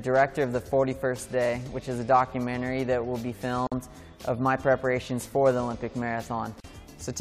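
Brief silent dropouts with softened edges open at 3.67 s (about 48 ms) and 6.60 s (about 41 ms). These are gaps at joins of encoded pieces, where untrimmed encoder delay and end padding remain.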